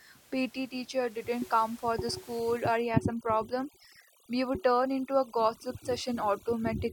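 From 2.39 s, after "didn't come for the", to the end, overdone noise removal strips bands near the noise floor, leaving twinkling near-silence.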